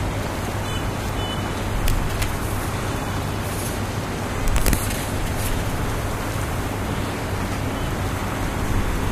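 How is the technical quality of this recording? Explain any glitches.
Three spots of integer overflow let this recording down. They land from 1.88 to 2.23 s, from 4.48 to 4.73 s, and as a single crack at 5.47 s. On those loud moments the level ran about 1 dB and then about 2 dB past the top of the integer range. Instead of being held at the limit, those peaks wrapped around to the opposite sign, jumping across the full scale. You hear violent, snapping cracks, much harsher than ordinary clipping.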